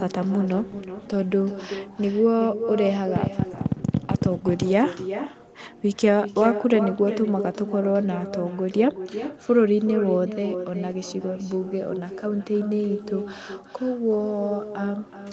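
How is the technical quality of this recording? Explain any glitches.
The recording has two clear problems: a constant echo trailing the speech, and a short burst of clicking early on.

Echo with no canceller runs through the whole clip. Every phrase is followed, around 0.4 s later, by a thinner copy about 10 dB quieter, giving the speech a hollow, doubled quality. The far end was playing the call through a loudspeaker, and its microphone picked that playback up. Nothing removed it before it was sent back, so the speech returned after a network round trip of roughly that length.

A train of clicks appears from 3.16 s to 4.63 s. Some twenty sharp ticks, at an average of 11.6 per second but spaced unevenly, cut through the speech and the gaps, peaking roughly 20 dB above it. The shapes are nearly identical, which points to a repeating electrical pulse, most likely interference from nearby equipment or a faulty connection or power supply, rather than anything in the room.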